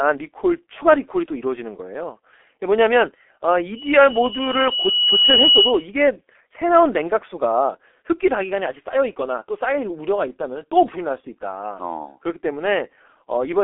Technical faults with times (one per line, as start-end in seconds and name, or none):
0.00-13.63 G.723.1 codec